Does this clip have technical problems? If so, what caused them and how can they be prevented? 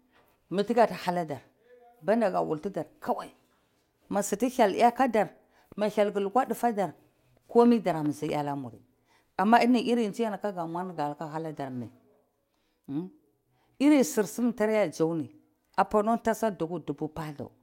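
No, no technical faults here.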